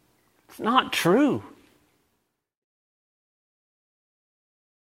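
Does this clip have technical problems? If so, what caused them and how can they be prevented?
No, there are no technical problems in this speech.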